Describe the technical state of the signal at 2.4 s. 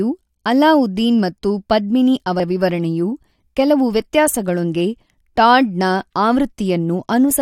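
At 2.39 s, between "ಅಲಾವುದ್ದೀನ್ ಮತ್ತು ಪದ್ಮಿನಿ" and "ವಿವರಣೆಯು ಕೆಲವು", compressed frames are skipped. The decoder never plays roughly three frames of about 21.3 ms each, so the speech jumps ahead by around 70 ms. Unlike a buffer dropout, there is no silent gap, only missing time.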